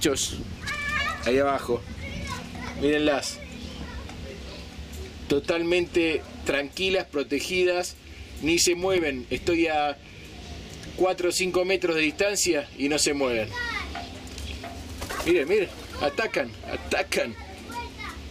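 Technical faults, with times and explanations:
8.73–9.10 s, CD scratch ticks: four evenly spaced ticks, each under a millisecond, recurring once per disc revolution as the player conceals unreadable data, unlike random clicks.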